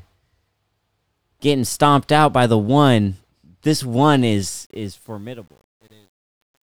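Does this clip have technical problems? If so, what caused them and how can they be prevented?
Yes. The fade-out stage dropped low-order bits without dither, which fits a 9-bit word length, causing truncation distortion on a fade from 4.34 s to 6.76 s. As the level falls, the waveform collapses into coarse square steps. The tail turns gritty, worst from 4.97 s to the end. To prevent it, run the fade at full resolution and apply dither before any reduction in bit depth.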